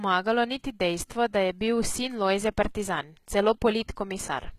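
The speech here has likely been through HE-AAC compression, at a data rate low enough to fit a bitrate around 20 kbps. The encoder carries only the lower spectrum and synthesises the treble by copying lower bands upward under a coarse envelope. Throughout the clip the codec damage is plainly audible: the rebuilt top end has harmonics that don't line up across the crossover, s sounds come out gritty, metallic or lispy, and nothing remains above 14.9 kHz.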